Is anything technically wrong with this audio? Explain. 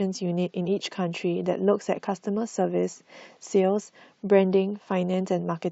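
No, nothing technically wrong can be heard in this speech clip. Nothing in it points to a problem anywhere in the recording or playback chain.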